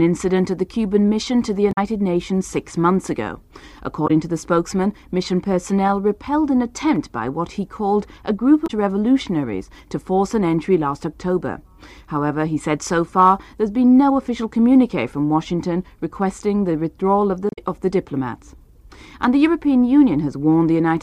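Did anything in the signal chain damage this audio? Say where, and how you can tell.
Yes: damaged data in a compressed stream, at the codec or storage stage. Short glitches at 1.69–1.78, 4.04–4.11, 8.64–8.70 and 17.49–17.59 s appear as vertical breaks on a spectrogram, where the decoder misread corrupted frames, lost sync and hunted for the next header.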